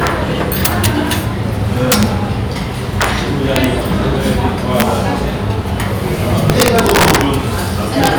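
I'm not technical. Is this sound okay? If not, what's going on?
No. The loudest moments crack harshly because of integer overflow: when the sound got louder than the file's number range could hold, the value wrapped around to the opposite extreme instead of stopping at the maximum. You hear it at 0.07 s, 0.65–0.86 s, 1.92–2.03 s, 3.02–3.04 s, 3.56–3.64 s, 4.80–4.82 s, 6.50–7.21 s and 8.04–8.07 s. Ordinary clipping just flattens peaks into a fuzzy buzz. These are sudden, violent snaps.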